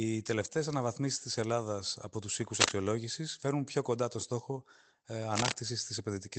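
At 2.55 to 2.76 s, right after "από τους" and before "φέρνουν πιο κοντά το", and again at 5.36 to 5.54 s after "κοντά το στόχο ε", a burst of cable scratch noise rides over the speech, roughly 5 dB above it. It sounds like a brief rustling scrape, likely from a worn cable or connector whose contact resistance jittered as it moved. On the waveform each burst shows as a dense, ragged cluster of spikes. The spectrogram shows an irregular broadband smear reaching up to the call path's 8 kHz ceiling.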